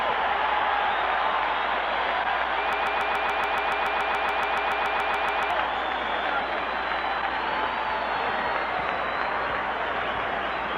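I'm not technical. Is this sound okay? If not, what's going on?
No. From 2.73 to 5.51 seconds there is a broken-record loop. Something in the playback or streaming chain most likely stalled and kept resending the last small piece of audio it held. You hear one fragment about 0.14 seconds long repeat exactly, back to back, twenty times, for nearly three seconds. Whatever sound belonged in that gap is lost, so the audio jumps ahead when normal playback returns.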